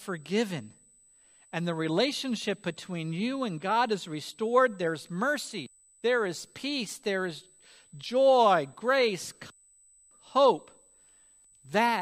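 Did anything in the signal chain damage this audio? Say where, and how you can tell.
Yes: USB whine leaks through power or ground in the analogue stage, a steady 8 kHz tone strongest at 16 kHz, about 25 dB below the speech, drawn as flat horizontal spectrogram lines.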